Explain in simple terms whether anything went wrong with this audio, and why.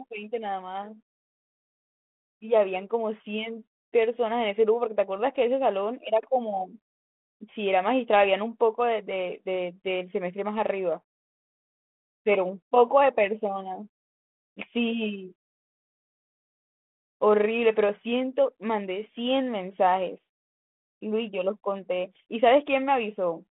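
Nothing went wrong here; the speech just has the slightly narrow, phone-line sound you'd expect from a normal cordless or telephone connection.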